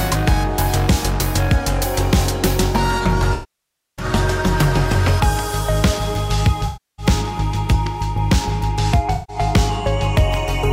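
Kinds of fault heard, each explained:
AAC frame loss with concealment, at 3.33 to 4.05 s, 6.66 to 7.06 s and 9.14 to 9.36 s: compressed frames went missing, and the decoder covered each gap by extending the last good spectrum with scrambled signs or interpolated energy. This leaves synthetic, smeared patches about 640 ms, 320 ms and 150 ms long. The longest gap gives the concealment the most time to fade its substitute before the real signal resumes.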